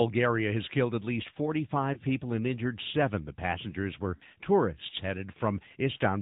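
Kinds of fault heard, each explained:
AMR narrowband mobile codec: the speech was coded with AMR-NB at 10.2 kbps, which samples at 8 kHz and rebuilds the voice from a vocal tract model excited by a few pulses. Nothing above 4 kHz survives, and the voice has a plainly audible buzzy, synthetic edge throughout.
Lost AMR speech frames: radio errors corrupted frames, so the decoder filled each gap by repeating the last good pitch and vocal tract settings at falling gain. One lost frame near 1.94 s gives a brief dip, and two lost frames at 4.16 s give a slightly longer warbling drop.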